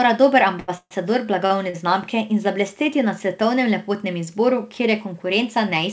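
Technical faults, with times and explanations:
0.60–0.70 s, short stall from a late packet: about 80 ms of the last sound is held on with a faint buzz, then the audio resumes where it stopped. Nothing is lost.
0.78–0.93 s, call audio freeze: the sound stretches into a fading buzz, then about 60 ms of silence, roughly 128 ms added in all. This is likely packets held up in transit. It is longer and goes silent, unlike the brief stalls.
1.46–1.52 s and 1.70–1.76 s, short stall from a late packet: two briefer holds of about 36 and 39 ms, with a slight dip before the sound continues intact.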